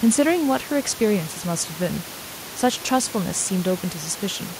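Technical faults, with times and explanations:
Nothing stood out on listening to this speech recording; the room noise underneath, about 17 dB below the speech, belongs to the recording itself.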